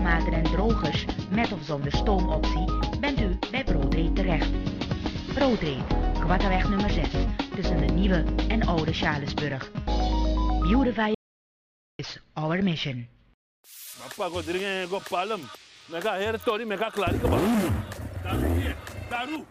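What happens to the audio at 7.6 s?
Nothing goes wrong at 7.6 s; the audio is intact there, with no dropout, click, distortion or other fault.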